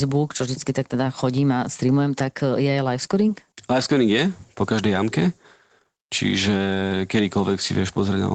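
Speech with no audible technical faults anywhere.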